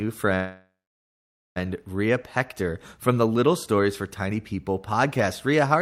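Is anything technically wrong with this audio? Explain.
Yes. A call audio freeze runs from 0.35 to 1.58 s. The speech stops advancing and the last sound is drawn out as a fading buzz, which then drops to silence for about 0.85 s. The likely cause is packets held up in transit, draining the jitter buffer so the receiver padded about 1.2 s with synthetic fill. When the packets arrived, the speech resumed exactly where it stopped, with nothing lost, but everything afterward lands about 1.2 s late.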